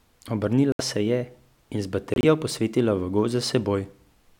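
A speech recording with two stretches of muted corrupt frames: the sound cuts abruptly to silence from 0.72 to 0.81 s, just before "se je", and from 2.14 to 2.24 s, just before "posvetila v". The decoder rejected damaged compressed frames and the player filled them with silence. The gaps, roughly 0.09 and 0.11 s, fit about three and four frames. Unlike concealment, nothing is smoothed over, and unlike a dropped chunk, timing continues unshifted afterward.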